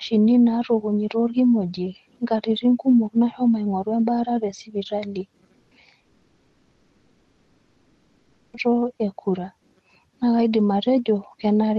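At 5.59 s a burst of packet loss removes about 120 ms of the stream. The receiver covers the hole by extending and fading the last sound, so a brief held buzz or hiss replaces the missing part before the audio jumps ahead at 5.74 s.

From 6.01 s to 8.56 s, likely a long network dropout: no usable audio arrives for about 2.5 s. Concealment stretches the last sound across the whole gap, fading it into a faint residue, and the audio resumes at 8.56 s with that stretch lost.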